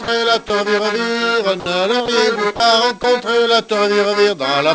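Short gaps where the sound gives way to steady comfort noise occur at 0.04–0.08 s (40 ms), 0.48–0.50 s, 1.60–1.66 s (60 ms), 2.06–2.08 s, 2.56–2.60 s and 3.02–3.04 s. This is likely sound dropped by the voice detector. Unlike packet-loss concealment, the gaps are filled with flat noise rather than repeated or stretched sound. The audio is band-limited to 8 kHz, which fits a G.722 call path at 64 kbps.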